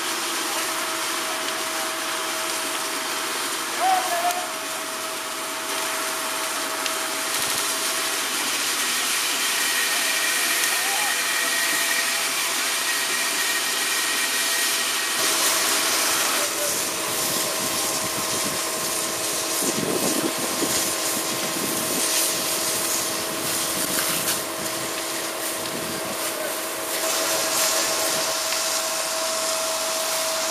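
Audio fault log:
7.38 to 7.62 s and 23.84 to 23.97 s, repeated frames. A 78.4 ms block plays three extra times, then a 130.6 ms block plays once more. The decoder replays the same compressed audio, so it stutters. The audio grows by 235 ms and 131 ms.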